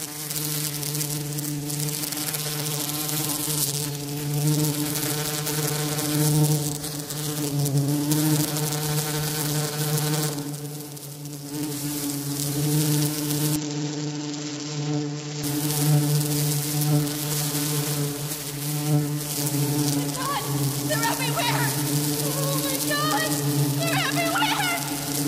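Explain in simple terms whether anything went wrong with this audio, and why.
From 13.56 to 15.44 s the everyday sounds turn duller and slightly quieter, with new faint background noise, likely an input switched to a poorer device, not a filter, since the noise changes too.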